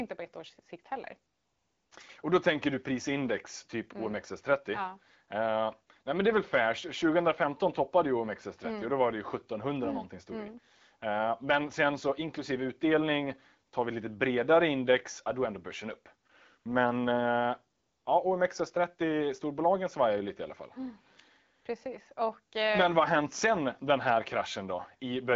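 AMR comfort noise appears at 1.33–1.91 s, 16.27–16.29 s, 16.59–16.65 s (just after "är ändå börsen upp" and before "uh ja"), 17.77–18.05 s and 21.61–21.65 s in this speech clip. Each time, the sending phone judged the moment silent and stopped sending speech frames. The receiver then filled the gap with smooth, steady synthetic noise, so the real background drops out and switches back in. The link is AMR wideband, and its clarity fits a rate of about 12.65 kbit/s.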